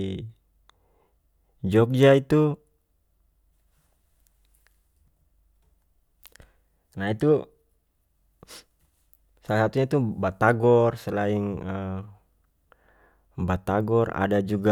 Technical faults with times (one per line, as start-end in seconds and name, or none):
none